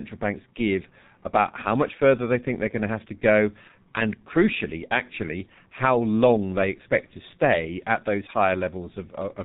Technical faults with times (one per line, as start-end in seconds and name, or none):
0.00-9.44 G.723.1 codec